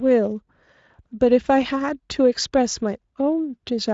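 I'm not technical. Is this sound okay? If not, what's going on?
Yes, no faults are audible.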